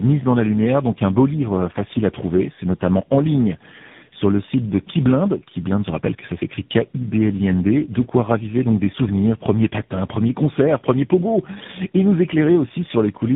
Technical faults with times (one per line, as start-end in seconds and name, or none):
0.00-13.36 tandem speech coding